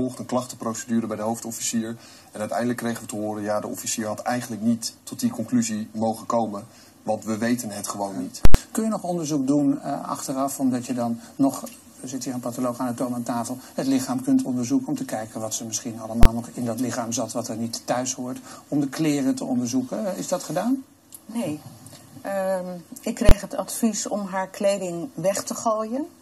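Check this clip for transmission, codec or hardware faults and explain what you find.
Three faults of one kind turn up: invalid numbers at full scale, at 8.45 to 8.55 s, 16.23 to 16.25 s and 23.29 to 23.31 s. A calculation produced infinite or invalid values that were pinned to full scale for a whole block. The 93 ms block, which fits 4096 samples, sounds like a loud pop at each end with nothing between. The two 23 ms blocks, which fit 1024 samples, each sound like a single bang.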